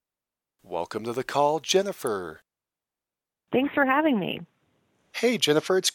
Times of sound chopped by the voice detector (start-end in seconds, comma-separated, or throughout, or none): none